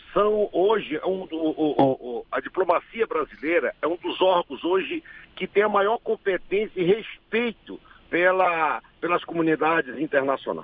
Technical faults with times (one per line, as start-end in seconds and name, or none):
none